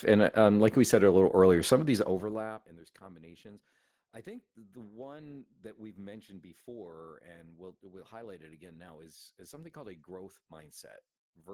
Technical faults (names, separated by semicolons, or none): Opus voice compression; zipper noise